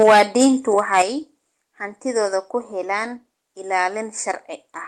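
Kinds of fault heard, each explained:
Microphone overload: The input gain was likely set too high, so the loudest peaks ran past the converter's limit and their tops were sheared off flat. The speech takes on a harsh, crackling edge from the start to 0.46 s, where peaks push about 10 dB over and roughly a tenth of the samples are flattened. The same grit returns more mildly from 0.78 to 1.02 s, about 5 dB over, with only a small share clipped.
Microphone volume stepped down: The call software likely judged the microphone too hot and cut the device's input level in a single jump. Voice and background both drop at once, with no gradual fade. The first step comes at 0.03 s, about 4 dB down, right after the distorted opening begins. A larger step of about 7 dB lands at 1.02 s, just as the second overloaded stretch ends.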